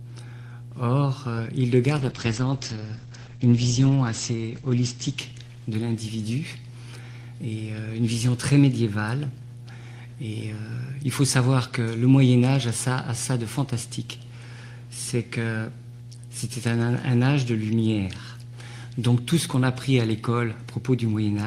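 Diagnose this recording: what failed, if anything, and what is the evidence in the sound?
Mains hum sits under the whole recording, a steady 60 Hz tone with a few low harmonics, fairly strong at roughly 15 dB below the signal. That's an analogue wiring fault: a ground loop or a transformer close to the cabling is coupling the power line into the signal path before it ever reaches the converter. Since it never varies, it's a fixed physical coupling, not anything digital. Check grounding and cable routing first.

The call bitrate drop runs from 1.99 s to 6.71 s. The sound goes rough and watery, and the top end collapses from full band to about 8 kHz. The worst stretch lasts about 2.7 s before things recover. This is call processing and codec behaviour: the bandwidth estimate fell, so the encoder was told to spend far fewer bits. The sound fits Opus dropping from around 32 kbps to around 11 kbps, coding coarsely and trimming the highs until the estimate came back.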